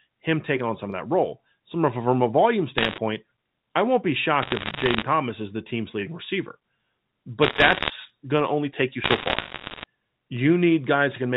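Bit errors on a digital phone line crackle through this speech at 2.78–2.98, 4.42–5.03, 7.42–7.90 and 9.04–9.84 s. Roughly one or two bits in a hundred flip in the 64 kbps G.711 mu-law stream, and each error changes a single sample, with hits on high bits making sharp ticks.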